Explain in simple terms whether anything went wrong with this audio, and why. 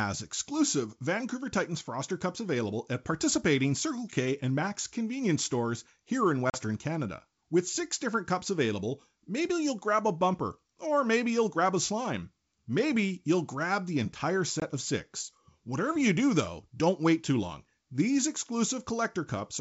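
Yes, there are two short dropouts from packet loss on an ADPCM call. At 6.50 to 6.58 s, right after "convenience stores here in", about 40 ms of audio, roughly two packets, vanishes and is replaced by silence. At 14.60 to 14.62 s, between "you'll grab the entire" and "of six", about one packet, 20 ms, is lost. The decoder rebuilds each sound from its previous prediction, so after each gap its prediction no longer matches the sender's. The sound comes back distorted until it catches up. The wideband telephone coding (G.722) carrying the call is working normally.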